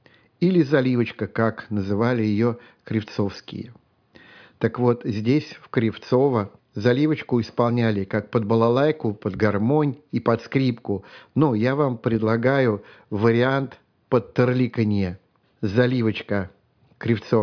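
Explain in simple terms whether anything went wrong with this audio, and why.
Nothing went wrong here that a listener would notice, since the speech comes across steady and unbroken, with no glitches, dropouts or odd sounds anywhere along the way.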